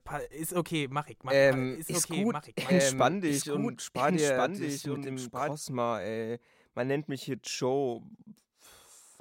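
From 1.44 to 5.52 s there's a doubled audio track: a clean second copy of the speech trails about a second and a half behind, a bit quieter, switching on and off abruptly, likely from a second capture path.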